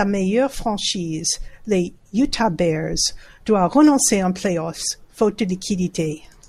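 At 4.93 s a single sharp click cuts through the speech, showing as a thin vertical line across the spectrum. This is most likely dropped samples: a couple of samples, a few hundredths of a millisecond of signal, went missing, so the waveform steps straight from one value to a later one. The gap is far too brief to remove any audible sound; only the abrupt discontinuity is heard.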